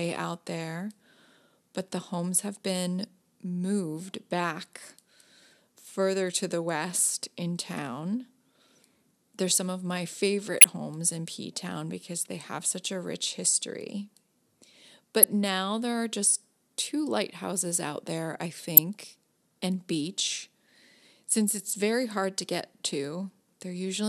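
It's a speech clip with three short glitches from a corrupt frame decoded: 10.60 to 10.64 s after "they're some of my", 15.23 s just before "now there are just", and 18.77 s after "lighthouses out there I". Flipped bits made the decoder spray energy into the wrong frequencies for one or two frames, peaking fairly hot, around -5 dBFS.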